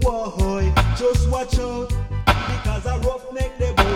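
At 1.58 s a sudden gain jump drops sound and background together by about 4 dB until the end, likely an unramped digital gain change; the waveform envelope steps down abruptly.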